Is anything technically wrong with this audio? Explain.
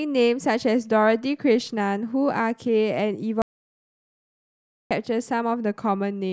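Yes. There is an audio dropout to silence from 3.42 s to 4.91 s, in the middle of the speech. For about 1.49 s the signal falls to silence, with no room tone or background noise underneath, and then the speech resumes abruptly. The likely cause is a brief loss of the input, such as a disconnected device, failed link or momentary mute, while recording continued writing zeros. Whatever was spoken during that gap is unrecoverable.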